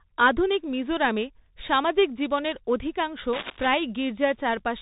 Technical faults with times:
0.00-4.82 Bluetooth CVSD headset codec
3.33-3.67 cable scratch noise

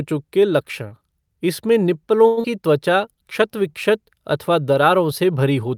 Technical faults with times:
2.27-2.39 short stall from a late packet
2.41-2.46 skip ahead
2.90-3.70 jitter buffer slow-down

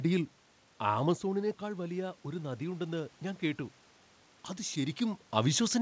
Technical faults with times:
1.38-3.69 automatic gain rising
4.45-5.81 pre-emphasis left on

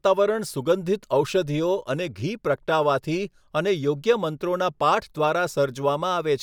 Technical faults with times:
none

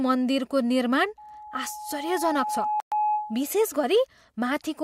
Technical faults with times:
1.17-3.54 loudspeaker feedback squeal
2.80-2.92 Bluetooth stall

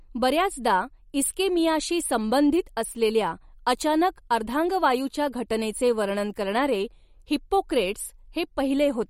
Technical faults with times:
0.00-9.10 MP3 compression

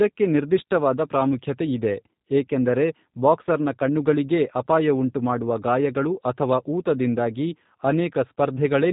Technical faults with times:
0.00-8.93 G.729 codec

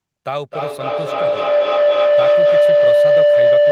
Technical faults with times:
0.51-3.71 feedback howl

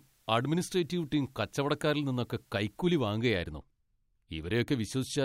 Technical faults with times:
0.00-3.06 low bit depth with dither

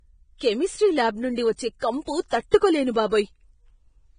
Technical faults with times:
0.00-4.19 Vorbis compression
0.38-0.41 pre-echo
1.79-1.82 pre-echo
2.51-2.62 pre-echo

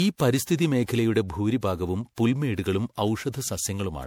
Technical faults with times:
0.00-4.06 generation loss

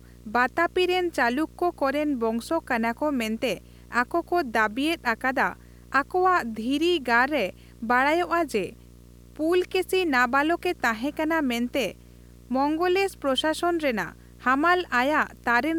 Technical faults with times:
0.00-15.79 video or display buzz

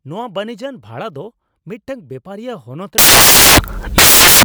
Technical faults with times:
2.98-4.45 samples built from the wrong bytes

